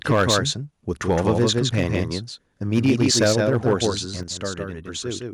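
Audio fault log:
Throughout: doubled audio track. The speech is likely being captured a second time through a slower path, so a full-band copy trails the original by roughly 150 ms at about 5 dB lower, giving a dry, flat echo with no room decay behind every syllable.
0.1–0.38 s, 1.1–1.49 s, 1.77–2.03 s, 2.73–3.85 s: microphone overload. The input gain was likely set too high, driving peaks about 5 to 6 dB past the converter's limit. Their tops are sheared off, which puts a harsh, crackling edge on the loudest syllables.
0.12 s, 3.24 s, 4.23 s: microphone volume stepped down. The call software likely reacted to the clipping by cutting the device's input level in single steps of about 2, 3 and 6 dB. Speech and background drop together abruptly each time, the last step most noticeably.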